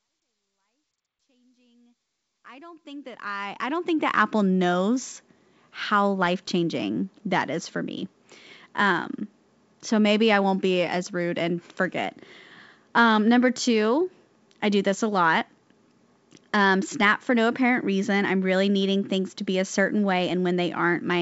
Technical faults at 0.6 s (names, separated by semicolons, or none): none